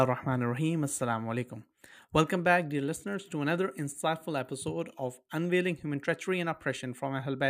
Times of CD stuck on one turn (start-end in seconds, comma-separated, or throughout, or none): none